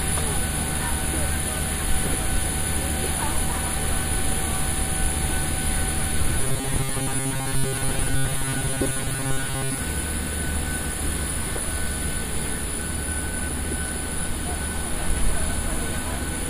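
From 6.38 to 9.78 s, new audio likely stopped arriving often enough, so playback kept refilling the gap by looping the last short buffer, roughly 7.5 ms long, while fresh material was skipped over. This is robotic sound from repeated short buffers. With repeats filling most of that stretch, the loop imposes a fixed pitch of 134 Hz, and the audio turns into a stiff, metallic buzz that only loosely tracks the original sound.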